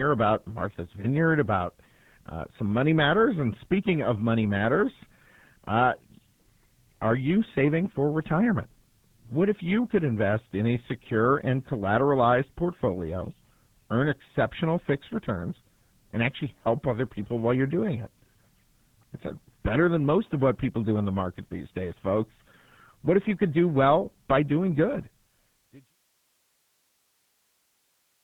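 From start to end the speech passes through the RealAudio 14.4 codec, a dial-up-era coder squeezing audio into what sounds like about 8 kbit/s. Heavy damage leaves nothing above 3.8 kHz, so voices turn muffled and gargly, even through the smooth fade out ending at 25.97 s.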